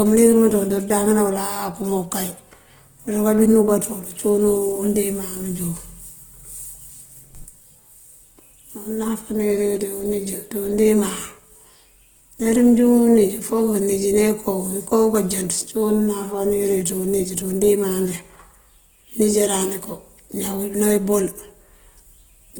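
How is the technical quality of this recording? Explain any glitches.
The speech carries plainly audible codec damage from start to finish. Likely Opus compression, running the whole clip. Bits are short, so missing bands get refilled with folded or noisy content. The speech sounds rough and grainy, with full bandwidth still reaching about 20.1 kHz. The sound points to a low rate near 16 kbps.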